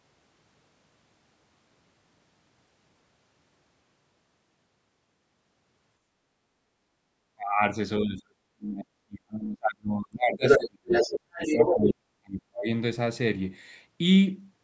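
At 6.44 to 7.06 s the echo canceller clamped down on the microphone while the loudspeaker played, so the background is gated, dipping by about 7 dB for roughly half a second before coming back.

From 7.34 to 7.63 s, and again from 8.0 to 10.92 s, speech is suppressed in double talk. Both sides were likely talking at once, and the canceller turned the talker down along with the echo. The voice drops by something like 35 to 40 dB, first in a short gap and then across about three seconds.

At 10.46 to 10.66 s the canceller likely left part of the loudspeaker signal in the microphone, and the other side's voice leaks through a little louder than the talker. The same leak returns from 10.88 to 11.93 s at about the talker's level.

From 11.31 to 12.69 s, overlapping that leak, the speech is suppressed in double talk again. The canceller is likely confusing the talker with the echo once more, cutting the voice by around 40 dB over roughly a second and a half.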